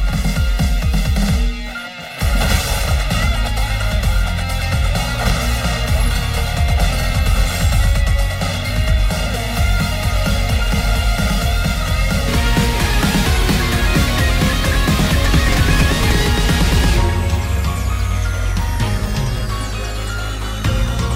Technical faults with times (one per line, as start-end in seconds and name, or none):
0.00-12.28 channel delay (comb filtering)